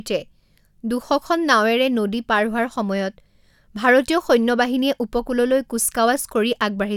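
A speech recording, with no technical faults to report. Nothing heard in it points to a problem anywhere in the recording or playback chain.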